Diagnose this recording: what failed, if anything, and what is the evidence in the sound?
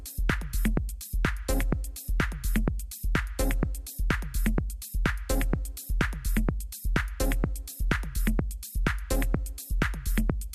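Nothing in this recording of everyday sound points to a failure at any stage. No stage from the wiring through to playback leaves audible evidence of a problem.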